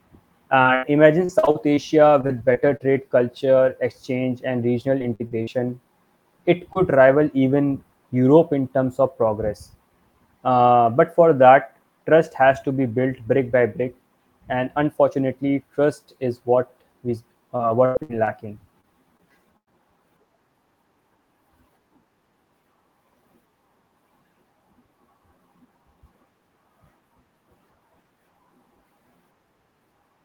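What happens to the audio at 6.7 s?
A brief smear from 6.73 to 6.77 s, just before "rival even": short concealed packet loss, where about 20 ms never arrived and the receiver extended the preceding sound to fill the gap.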